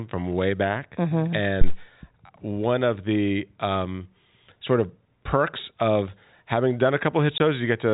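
At 1.61 s a deep, low thud breaks into the speech and has died away by 1.79 s, its tail fading quickly over roughly 39 ms. This is a phantom power thump: a supply was switched on or off while the input was live, and the sudden voltage step travelled through the coupling capacitors into the signal path as a single low-frequency pulse rather than anything acoustic in the room.

Near the end, from 7.38 to 7.40 s, the speech drops out abruptly for 20 ms, leaving a gap with hard edges. This is packet loss filled with silence. The gap's length fits a single lost 20 ms packet, and the receiver played plain silence in its place instead of concealing it. The surrounding audio carries the G.711 telephone band, with nothing above 4 kHz.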